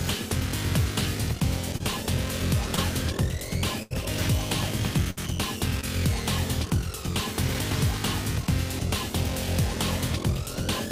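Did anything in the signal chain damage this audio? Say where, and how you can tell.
Yes. Short concealed packet loss on the network: about 20 ms missing at 1.77, 2.76 and 5.81 s, filled by extending the preceding sound into brief smears.

A burst of packet loss dropped about 80 ms at 3.82 to 3.92 s and 60 ms at 5.10 to 5.19 s. The last sound holds, fades, then jumps ahead.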